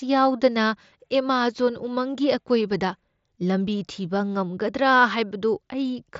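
Speech, with no technical faults to be heard.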